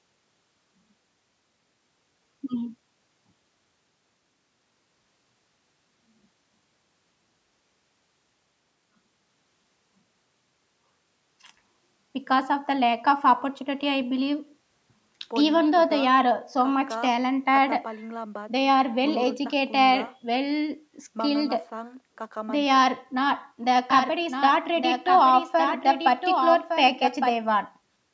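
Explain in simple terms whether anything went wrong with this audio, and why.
A doubled audio track appears from 23.9 to 27.4 seconds, most likely because the speech was captured a second time by a slower path. A quieter copy trails about a second behind, so everything overlaps itself, then cuts off abruptly.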